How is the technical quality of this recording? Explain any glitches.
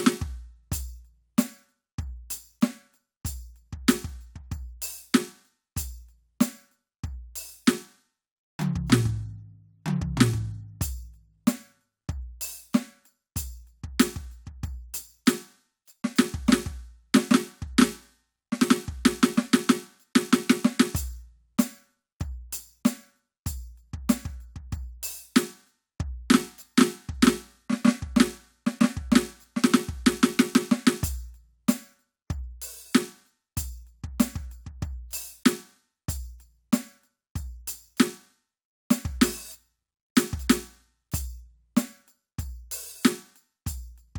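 The music carries a steady ticking fault over its first 30.9 seconds. From 0.0 to 30.9 s, a resampler restarted on every block produces regular ticks at 10 Hz. Each 100 ms block was converted separately (consistent with a 48 kHz to 44.1 kHz conversion), so every block edge carries a small discontinuity. On a spectrogram this appears as faint vertical lines every 0.1 s, and on the waveform as small steps at block boundaries.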